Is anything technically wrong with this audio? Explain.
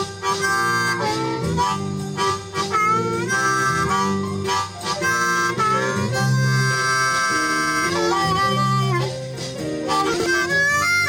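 Yes. From 10.14 to 10.26 s the sound briefly jumbles, where it seems to skip ahead and then step back. This is a case of chunks out of order. A 60 ms block of audio arrived one chunk late and was played after the block that should have followed it. Nothing is missing, but the swap puts hard joins between mismatched waveforms.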